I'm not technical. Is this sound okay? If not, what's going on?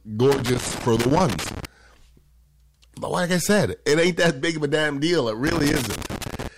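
No. Two separate problems can be heard in this speech recording.

The first is hard clipping, and it runs through the whole clip. The voice was recorded louder than the equipment could handle, so the tops of the loudest moments were sliced off flat. Only a small share of the sound is affected, and the loudest peaks pick up a crackle. What gives it away is that the roughness follows the voice: it appears only when the speech gets loud and goes away in quieter parts.

The second is loose connector crackle, from about 0.32 to 1.65 seconds and again from about 5.47 seconds to the end. A cable plug or socket with a worn or dirty contact kept briefly losing and regaining its connection, which chopped the sound into uneven bursts of scratching. Unlike the clipping, this crackle is not tied to how loud the voice is. It comes in patches at particular times and sounds scratchy and random.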